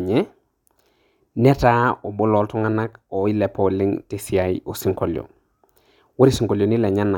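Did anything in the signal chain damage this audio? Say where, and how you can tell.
No, nothing in the chain damaged it.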